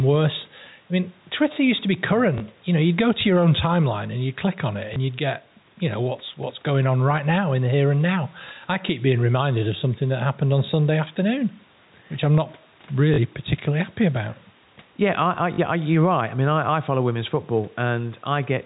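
Throughout the recording there is gain pumping: the level is repeatedly pulled down on loud sounds, squashing loud and soft parts closer together, with a swing of roughly 5 dB. The likely cause is input gain set too high, with a fast limiter repeatedly pulling the level back down.

Packet loss with the last packet repeated occurs four times. At 2.38 to 2.40 s, after "used to be", a 20 ms segment is replayed. The same happens at 4.94 to 4.96 s, after "you'd click on it". Both are brief blips, consistent with single 20 ms packets being replaced by a copy of the previous one. Longer 40 ms repeats occur at 13.14 to 13.18 s, between "which I'm not" and "particularly happy about", and again at 15.54 to 15.58 s. There, the doubled segment produces a short robotic buzz at about 50 Hz.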